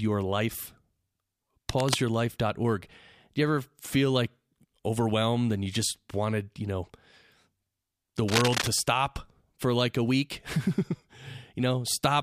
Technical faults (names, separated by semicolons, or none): cable scratch noise